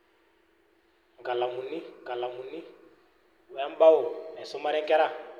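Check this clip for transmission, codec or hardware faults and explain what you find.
There's one fault here, a doubled audio track in this speech clip. From 2.05 s to 4.35 s, a second copy of the speech sits roughly 0.7 s behind the original, a bit quieter, maybe around 5 dB down. It's likely the same signal getting picked up again through a slower path and summed back in. The copy is dry and full-band with no room tail, and it cuts in and out abruptly at both ends.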